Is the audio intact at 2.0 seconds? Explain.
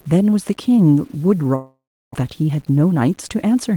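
No. At 2.0 s the audio sits inside a long network dropout from 1.55 to 2.16 s, likely caused by a stream interruption. The last sound is extended as a fading buzz or hiss before silence takes over, and on return about 0.4 s of audio is simply gone. The waveform shows a decaying tail and then a flat line; the spectrogram shows a smeared, fading band and then a blank gap.

Throughout, including here, low bit depth without dither adds grainy distortion about 35 dB below the signal, which fits 8-bit truncation. It shows as stepped waveform edges and broadband speckle that follows the level.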